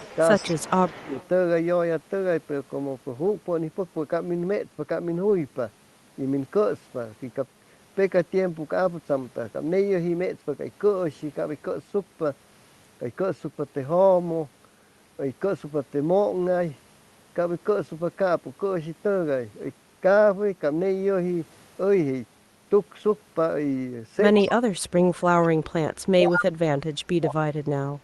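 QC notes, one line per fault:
0.00–1.28 s, 24.39–24.51 s, 25.43–25.48 s, 26.30–26.45 s, echo leak: a delayed copy of the speech trails the original by 152 ms. It is about 20 dB below the speech at the start, then about 15, 30 and 5 dB below in the later scraps, so the 26.30 s burst is nearly as loud as the talker. The likely cause is a far-end loudspeaker echo that the canceller failed to remove fully. On a spectrogram the same harmonic contours repeat, shifted 152 ms later and fainter. In the waveform, ghost envelopes follow the main ones.
0.44–0.54 s, 0.92–1.13 s, 24.46–27.74 s, speech suppressed in double talk: the talker's level dips by about 10 dB and then about 20 dB in the two brief early gaps. In the late stretch the level drops in pieces totalling roughly 2 s, down by as much as about 35 dB, so the speech sounds chopped. This is likely the echo canceller turning down its own talker along with the loudspeaker echo while the two overlap. 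The waveform shows sudden notches in the envelope. On the spectrogram the energy fades out.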